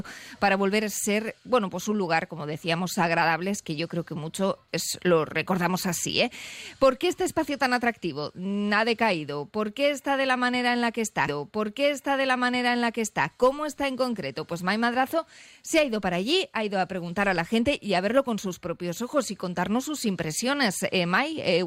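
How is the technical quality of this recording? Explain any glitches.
The recording's quality is marred by one playback glitch, a stream segment repeated. At 11.27 s a small blip marks a jump back, and the preceding two seconds of audio play again through 13.27 s. The player fetched or queued the same stream segment twice, adding 2 s of duplicated material.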